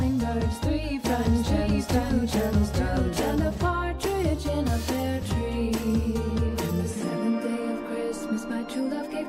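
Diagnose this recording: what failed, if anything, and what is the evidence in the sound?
From 1.04 s to 3.58 s a doubled audio track is heard: a dry, full-band copy trails about a second behind at roughly equal level, cutting in and out abruptly. The likely cause is a slower second capture path or an out-of-step edit.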